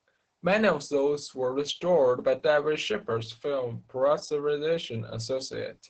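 Opus voice compression runs through the whole speech clip. Its energy stops at about 8.6 kHz, and the heavy coding damage points to a low-bitrate wideband SILK setting of around 10 kbps. That coarse linear-prediction coding leaves the speech muffled, hoarse and slightly robotic.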